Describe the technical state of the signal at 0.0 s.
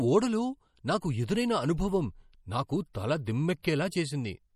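Right from 0.0 s and through the whole clip, the speech has plainly audible MP3 compression artefacts, likely from a low bitrate around 48 kbps: watery swirl, nothing above 18.1 kHz.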